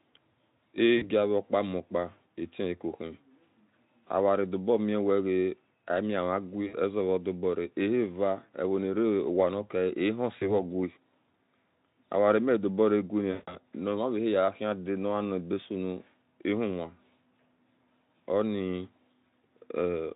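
In this speech clip, the sound briefly smears into a fading buzzy or noisy tone at 0.97–1.09, 6.67–6.75, 10.39–10.49 and 13.31–13.55 s, the last and longest dropout covering about 160 ms. This is VoIP packet loss concealed by the speech codec: the Speex decoder, whose coding otherwise holds up cleanly, stretched its last pitch and filter across the missing audio with falling gain, and the voice stays weak briefly after each gap.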